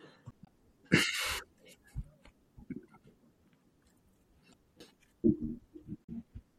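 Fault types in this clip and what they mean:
MP3 compression: Throughout the speech there is plainly audible codec damage: a watery, swirling quality, dulled treble and metallic chirping on sibilants, likely from MP3 encoding at a low bitrate that fits around 64 kbps. The encoder is starved of bits, so it cuts the top end and drops weak frequency lines frame by frame. A spectrogram shows a hard ceiling on the highs and speckled, flickering holes in the upper bands.
CD skip: The laser loses its place on the disc, and the player briefly mutes before carrying on from a different point. It happens at about 0.31 s and again at 4.80 s, each time as a tick with a very brief silence, and the speech abruptly continues from elsewhere. On the waveform this shows as a tiny flat gap of about 15 ms and then 7 ms with a discontinuity on either side. The spectrogram shows a thin vertical break.
damaged data in a compressed stream: Corrupt bytes in the compressed data make the decoder misread frames, lose sync and hunt for the next valid frame header. 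Three short glitches come through: 0.42 to 0.48 s, 4.50 to 4.55 s and 6.04 to 6.09 s, each roughly 50 ms long. On a spectrogram each one is a brief disruption that breaks the speech pattern.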